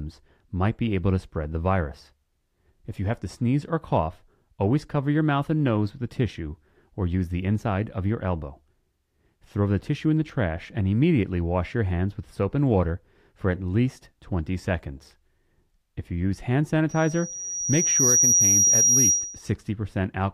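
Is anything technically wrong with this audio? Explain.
Yes. From 16.89 to 19.52 s, after "you use hand", loudspeaker feedback squeal: the microphone re-amplifies its own loudspeaker at 5.8 kHz, swelling over about a second to roughly 5 dB above the speech. That growth separates it from a steady electrical whine.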